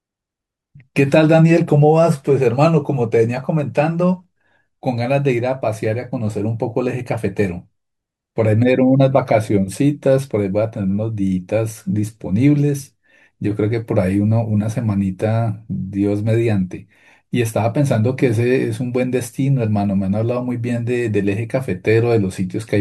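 No audible technical faults.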